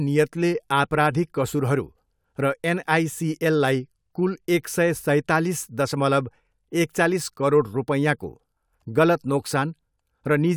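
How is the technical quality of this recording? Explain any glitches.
No technical glitches can be heard in this recording.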